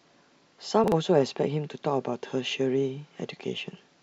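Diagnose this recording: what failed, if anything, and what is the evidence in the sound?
Chunks out of order at the buffer: a 40 ms chunk played one slot late, jumbling the speech from 0.84 to 0.92 s.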